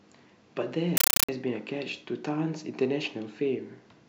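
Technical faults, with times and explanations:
0.97–1.29 s compressed stream played as audio: undecoded AC-3 data went out as plain samples, so loud static of 8 ms noise bursts chatters 31.25 times a second.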